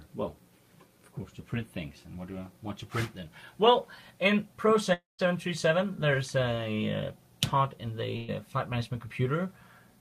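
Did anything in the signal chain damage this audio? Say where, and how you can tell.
Yes, it's damaged at the network stage. From 4.93 to 5.20 s there's a long network dropout, likely. About 0.26 s never arrives. The receiver stretches the last sound into a fading buzz or hiss, then leaves roughly 170 ms of silence before the audio picks up further along.

A second network problem shows up at 8.16 to 8.30 s as a burst of packet loss. About 120 ms goes missing, and the receiver covers the gap by holding and turning down the last sound, so there's no silence at all. The audio then resumes past the lost section.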